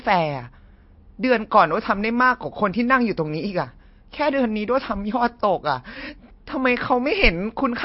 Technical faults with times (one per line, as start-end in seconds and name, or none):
0.00-7.84 MP3 compression